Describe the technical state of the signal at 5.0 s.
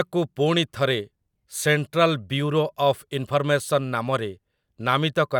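At 5.0 s the signal is intact, with no audible fault at that point in the speech.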